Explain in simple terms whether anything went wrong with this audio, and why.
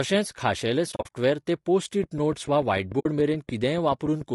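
Two things went wrong with this speech recording. Throughout, the voice sounds rough and grainy, with a hissy, artificial edge on the higher sounds. That is most likely low-delay AAC compression, the kind used in video calls. It chops the sound into very short slices to keep delay down, which makes the voice's tones hard to capture cleanly, and when too little data is allowed the gaps between them fill with noise.

The second problem is AAC frame loss with muting. Between 0.91 and 1.11 s, just before "ते पोस्ट", the sound keeps dropping out in brief holes, the longest lasting a few hundredths of a second. That pattern suggests several small chunks of audio went missing and the player filled them with silence. Because each chunk fades out and back in, the holes sound soft rather than clicky. A single shorter gap, about 60 ms long, occurs from 2.99 to 3.06 s.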